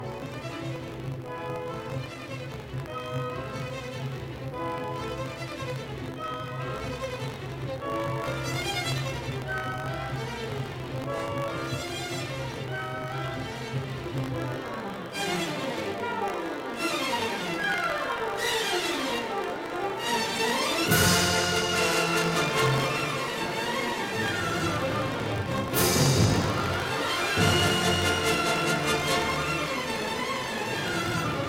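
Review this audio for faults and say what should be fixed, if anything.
Buffer tearing runs throughout the clip as a steady robotic buzz at 50 Hz, which points to an audio period of about 20 ms. The program filling the ring buffer and the hardware draining it have drifted out of step, so their positions cross inside every period. A small slice of each period, a couple of percent, holds audio from roughly 70 ms earlier, one lap back around the buffer, with hard joins at both edges. Those joins repeat at the period rate and produce the buzz, which is heard only while sound is present. To prevent it, keep the writer's position tied to the hardware read pointer and leave a safety margin, so the two can never overlap inside a period.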